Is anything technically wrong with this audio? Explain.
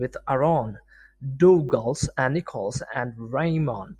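Yes. Around 1.69 to 1.71 s the speech has chunks out of order: one 10 ms chunk arrived late and plays one chunk after its proper place. Nothing is missing, but the swapped pair creates three hard joins, heard as a brief jumbled moment.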